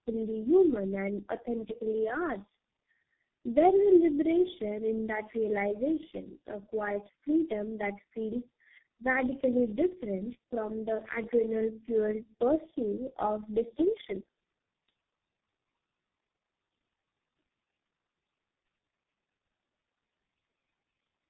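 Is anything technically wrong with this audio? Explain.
Yes. Throughout the clip the speech shows tandem speech coding. It crossed three low-rate speech codecs in a row, with plain telephone-network links between them, so it was decoded and re-encoded at each border. Each coder had to model the previous one's errors as if they were real speech. The damage compounds: the voice sounds rough, muffled and warbly, worse than any single codec would make it, with nothing above 3.7 kHz.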